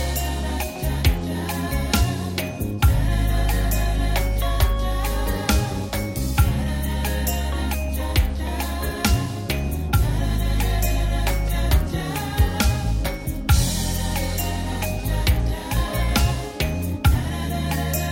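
Nothing is technically wrong with the audio in this clip.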